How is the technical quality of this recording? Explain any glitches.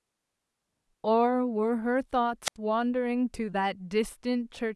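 The recording has one glitch, a wireless microphone squelch dropout from 2.44 to 2.56 s. The analogue FM radio signal fades until the receiver's squelch mutes the output, so a brief rise of hiss gives way to a hole of about 79 ms of near silence before the speech returns.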